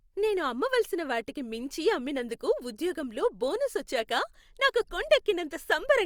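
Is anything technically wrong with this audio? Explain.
Yes. At 4.83 s, just after "ఉద్యోగంలో బోనస్ వచ్చాక నాకు", there is a corrupt frame decoded: a few damaged compressed frames were played despite flipped bits, so misread codes and wrong gains sent energy to the wrong frequencies. It is heard as a tiny blip, very faint at around -60 dBFS. On a spectrogram it shows as a thin vertical smear of misplaced energy unrelated to the speech harmonics. The waveform shows only a minute irregularity.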